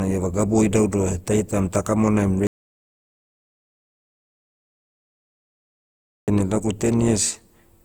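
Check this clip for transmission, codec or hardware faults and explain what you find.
Two faults stand out: generation loss across the whole speech clip, and a long dropout to silence in the middle.

Generation loss runs throughout. The speech was likely decoded and re-encoded around ten times through a lossy codec, with the character pointing to Opus at roughly 64 kbit/s. Each pass requantised on a shifted frame grid, so the errors stacked up. The result is a swirly, hollow, smeared texture with blurred consonant attacks, with nothing above 20.2 kHz.

The audio dropout to silence runs from 2.47 s to 6.28 s, right after "ta kamonaim". The input was likely lost while the recorder kept writing silence. The speech cuts off abruptly into silence with no room tone, and about 3.8 s of material is gone before it resumes mid-flow.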